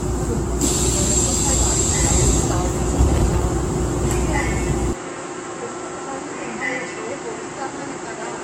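From the start and through the whole clip the sound has a swirly, hollow smear, with transients that blur instead of snapping. This is generation loss, likely from the audio being decoded and re-encoded around ten times with AAC. Each pass requantised on a shifted frame grid, so noise and spectral holes piled up. The result is more hollow and smeared than a single encode at the rate this suggests, around 96 kbit/s, would produce.

At 3.14 to 3.42 s a short, irregular burst of crackle and scratching cuts across the sound. This is loose connector crackle: a worn or dirty contact made and broke rapidly, chopping the signal. Its ragged, uneven texture and brief duration set it apart from codec artefacts. Those would be tonal or swirly and present throughout, not scratchy and confined to a fraction of a second.

From 4.93 s to the end the sound turns duller and quieter, dropping by about 10 dB with nothing above 8.7 kHz. 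A new background noise sits roughly 45 dB below the signal. This fits an input switched to a poorer device, likely another microphone or a headset's call profile. There is no gap at the switch. What distinguishes it from the codec smearing is the abrupt step change in bandwidth, level and noise floor at one moment, rather than a steady degradation.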